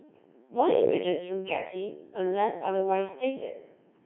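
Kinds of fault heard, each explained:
Codec 2 vocoder: speech is rebuilt from pitch, voicing and spectral envelope at about 1.3 kbit/s, sounding robotic and buzzy, band-limited near 250 Hz to 3.4 kHz.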